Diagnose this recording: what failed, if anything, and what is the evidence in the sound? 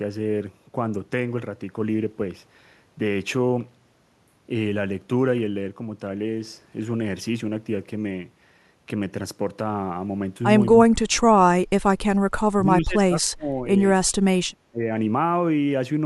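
Call processing likely failed, giving speech suppressed in double talk: the echo canceller could not separate local speech from far-end echo and muted both. Speech is turned down at 10.76–11.8 s and 12.52–13.5 s, by roughly 35 dB, with a shallower dip at 14.7–14.79 s.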